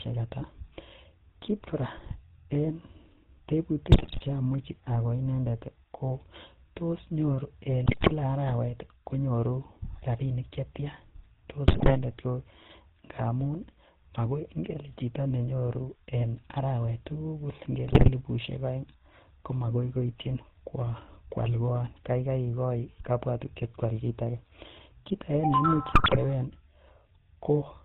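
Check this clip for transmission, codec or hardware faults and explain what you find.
The speech runs through the GSM full-rate codec for its whole length, and five bursts of GSM bit errors break it up.

GSM full-rate codec, throughout: the voice is rebuilt from a vocal-tract filter driven by a sparse, regularly spaced pulse excitation, which fits 13 kbps full rate. It sounds plainly buzzy and gravelly. A spectrogram shows a hard ceiling at 4 kHz and smeared, grainy harmonics below it.

GSM bit errors at 3.9–4.21 s (just before "cheyache agoi"), 7.86–8.13 s (after "tos nyoru"), 11.68–11.97 s, 17.86–18.10 s (between "nyoru en arawet tugul" and "aeng komagoi") and 25.92–26.17 s: corrupted filter, pitch and gain parameters produce squawks, pops and gargling. In the waveform these show as sudden amplitude spikes, and the spectrogram shows distorted frames lasting about a quarter to a third of a second.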